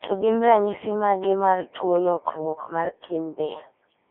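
From start to finish the speech sounds robotic and buzzy, squeezed into a narrow 300 Hz to 3.6 kHz band with heavy codec damage. This is the Codec 2 vocoder: only pitch, voicing, energy and spectral shape survive, resynthesised from sine waves, at a rate that fits roughly 1.3 kbit/s.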